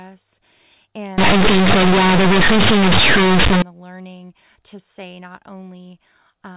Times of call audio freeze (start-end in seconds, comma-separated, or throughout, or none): none